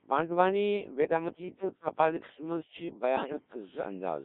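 Robotic, buzzy speech from start to finish, confined to roughly 200 Hz to 3.7 kHz: the Codec 2 vocoder, at what sounds like about 1.3 kbit/s, rebuilds the voice from sine waves. From 3.17 to 3.32 s it lurches into warbling, bleeping gibberish, as bit errors on digital voice radio corrupt a few frames' pitch, level and spectral settings.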